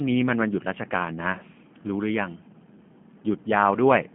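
Throughout, the speech has passed through a G.729 codec, which rebuilds it from a vocal tract model, pitch prediction and a few pulses per frame at a rate the sound suggests is about 8 kbit/s. The band runs only from 150 Hz to 3.4 kHz, and the result is a plainly rough, synthetic sound.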